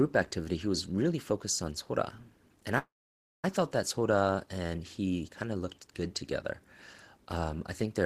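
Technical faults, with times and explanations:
2.78–3.45 s, call audio freeze: the speech stops and the last sound carries on briefly as a fading buzz, then drops to near-silence for about 560 ms of the roughly 650 ms gap. Speech then resumes exactly where it broke off, with nothing skipped, so everything after this point plays about 650 ms later than before. This is likely packets stalling in transit until the jitter buffer emptied, with the receiver stretching the final sound while it waited.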